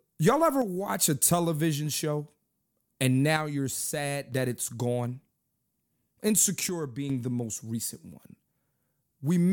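Three times the speech steps down abruptly by about 6 dB and then jumps back up: from 0.62 to 0.89 s, from 3.37 to 4.32 s, and from 6.69 to 7.10 s. This is likely one channel dropping out, with the mono sum losing half its shared signal. A fade or compressor ducking would ramp, but these edges are instantaneous, the drop is a clean halving, and the tone stays the same.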